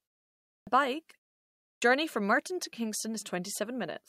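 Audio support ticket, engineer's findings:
Clipped start after a pause at 0.57 s and 1.72 s: onsets after a silence of about 0.6 s lose roughly 100 ms and come in abruptly. Probable cause is the output device sleeping during silence and waking too late. Unlike muted pauses, where the background drops out in gaps but no speech is lost, here the opening sounds are cut.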